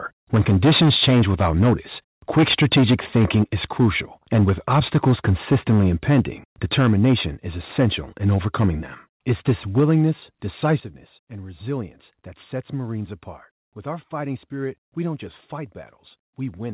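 Microphone overload affects this speech recording at 0.33–1.95, 2.36–3.88, 4.33–6.2, 6.72–7.14, 7.63–7.87, 8.26–8.69, 9.29–10.0 and 10.69–10.74 s. Peaks are flattened at the converter's ceiling, giving the loudest syllables a harsh crackle. The likely cause is input driven about 13 dB too hot at first, easing to about 2 dB. The microphone volume is stepped down at 0.35, 3.36, 6.74, 9.8 and 10.8 s. Each time, voice and background drop abruptly, by about 3 to 4 dB and finally about 9 dB, likely from call software cutting the input level after detecting clipping. All of this passes through a narrowband call path with nothing above 4 kHz, which fits 64 kbps G.711 mu-law.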